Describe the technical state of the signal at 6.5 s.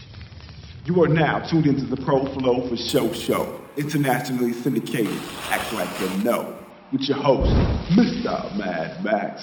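At 6.5 s the signal shows imaging from sample-and-hold upsampling (2.89 to 6.70 s): audio at a 12 kHz rate was raised to 44.1 kHz by repeating samples without smoothing, leaving mirror images from 6 to 12 kHz, about 18 dB down, heard as metallic fizz.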